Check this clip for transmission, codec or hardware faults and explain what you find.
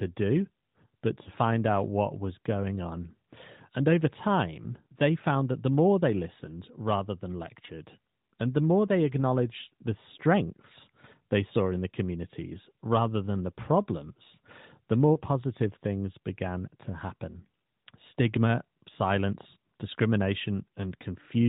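Three short breaks in the speech. Lost AMR speech frames at 1.24 to 1.30 s, 7.66 to 7.70 s and 15.14 to 15.20 s: radio errors corrupted a frame so it failed its check, and the AMR narrowband decoder filled the hole by repeating the last good pitch and vocal tract settings at reduced gain. Each dip or brief warble fits a single missing 20 ms frame, heard against the narrowband codec's cutoff above 4 kHz.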